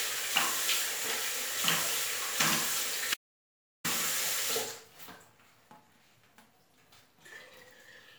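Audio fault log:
3.14–3.84 s, audio dropout to silence: the sound cuts off abruptly and resumes mid-flow after 0.70 s of total silence, with no background tone in the gap. The input was likely lost briefly while recording continued writing silence, so that stretch is gone.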